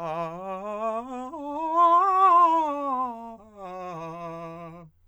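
Music clip, no audible faults.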